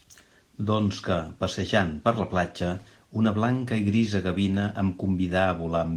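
Nothing in this speech goes wrong, and the Opus voice compression it passes through, running around 20 kbps in hybrid mode, does its job with only a light touch.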